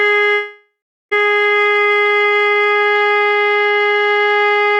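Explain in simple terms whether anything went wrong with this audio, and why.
From 0.33 s to 1.13 s the music breaks off: the last sound is stretched into a fading buzz, then about 0.39 s of near-silence, and playback resumes with roughly 0.78 s missing. This is most likely a long network dropout, with the receiver filling the gap.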